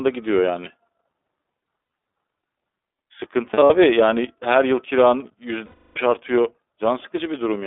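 Throughout, the speech passes through the iLBC codec. The band runs only from 250 Hz to 3.6 kHz, and the plainly audible roughness and synthetic edge fit iLBC's 15.2 kbps, 20 ms mode. Unlike generic low-bitrate blur, each frame is coded on its own.

Lost iLBC frames occur at 1.66–1.90 s (about 100 ms missing, in short bursts), 3.54–3.71 s (120 ms) and 5.66–5.98 s (one 300 ms loss). Each gap fills with a held, buzzy vowel from the repeated pitch cycle, and the longest one fades. The voice returns almost at once afterward, without the smeared recovery of predictive codecs.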